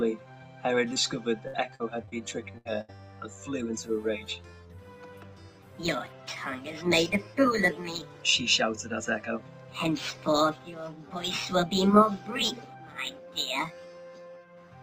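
At 0.93 s the audio smears briefly, a wobble lasting about 20 ms before it settles. This is short concealed packet loss: a sliver of the stream arrived too late to decode, so the receiver bridged the hole by carrying the preceding sound forward. It extended the pitch if the sound was voiced and used shaped noise if it was not, then blended back into the real signal. Much stronger damage follows as repeated packet loss (robotic sound), first from 1.48 to 2.14 s and again from 2.52 to 3.00 s. Each stretch turns choppy, with pieces missing. In the first, four holes were patched, covering about 140 ms in total or 21% of that span, and the longest runs 58 ms. The second is worse. Four holes again add up to about 200 ms, 38% of the span, with the longest at 73 ms. In both, packets kept failing to arrive in time, and each one was filled by extending the last sound just before the next gap opened. 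That stacking of patches produces the broken, synthetic texture.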